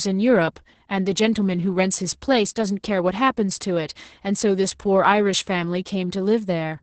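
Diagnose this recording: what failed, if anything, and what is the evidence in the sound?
The speech sounds muffled, hoarse and faintly robotic from start to finish, with nothing above 8.7 kHz. This is Opus voice compression at the codec stage: the SILK linear-prediction coder, in wideband mode, is coding the excitation coarsely, which fits a bitrate around 10 kbps.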